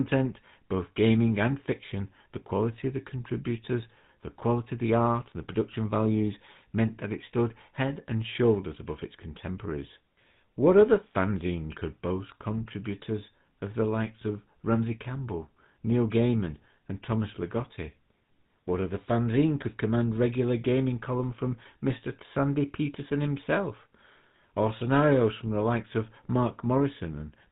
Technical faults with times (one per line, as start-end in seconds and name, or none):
0.00-27.51 GSM full-rate codec